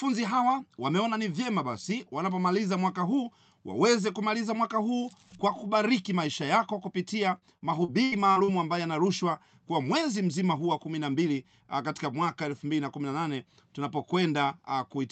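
From 7.38 to 8.51 s, after "kubariki maisha yako kupitia" and before "ambayo yanarushwa kwa mwezi", repeated packet loss (robotic sound) breaks the speech six times. Each gap, the longest about 79 ms, is patched by stretching the preceding sound, so roughly a quarter of the stretch is filled in this way. A single dropout would give one hole, not this clustered, choppy run, all heard through a call codec band-limited to 8 kHz.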